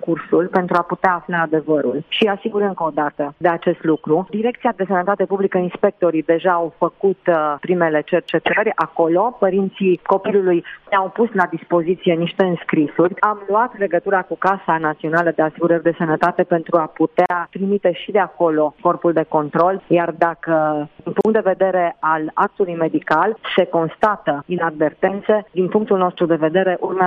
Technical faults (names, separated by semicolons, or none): gap at a join of encoded pieces